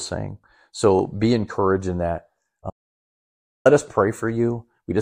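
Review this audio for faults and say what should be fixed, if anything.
At 2.70 s the speech cuts off abruptly mid-flow and the track falls to silence, with no room tone at all, until it resumes just as suddenly at 3.65 s. This is an audio dropout to silence lasting about 0.95 s, and whatever was said in that stretch is lost. The likely cause is a momentary loss of the input, such as a loose connection or brief mute, while recording continued writing silence. Secure cabling and monitor input levels live during capture.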